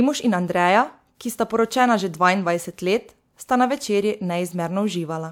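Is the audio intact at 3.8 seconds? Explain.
Yes, the speech at 3.8 seconds plays through intact, with no audible fault at that moment.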